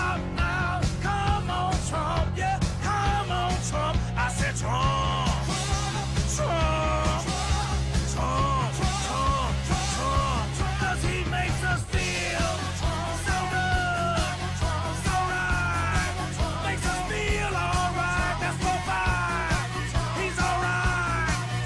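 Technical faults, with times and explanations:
No technical faults detected in the clip.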